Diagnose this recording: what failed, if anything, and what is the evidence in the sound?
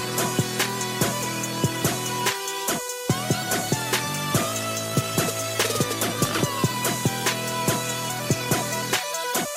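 Nothing in the signal chain points to a failure, and across the whole recording no stage leaves audible evidence of a fault.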